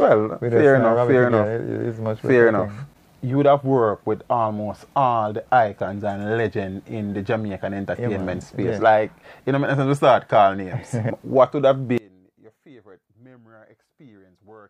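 One channel inverted, from 11.98 s to the end at 14.69 s: the sound abruptly drops by about 27 dB to a faint residue, likely because one stereo channel's polarity flipped, so material common to both sides cancels when summed to mono.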